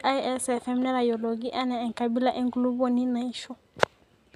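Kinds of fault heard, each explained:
No kinds of fault are heard in the speech.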